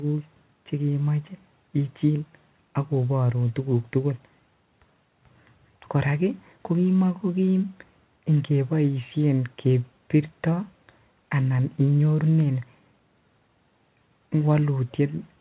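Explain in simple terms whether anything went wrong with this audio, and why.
Nothing went wrong with this speech recording. It comes through a normal landline phone connection using G.711 telephone coding, so it has the familiar narrow telephone sound with nothing above about 4 kHz, exactly as a phone call should.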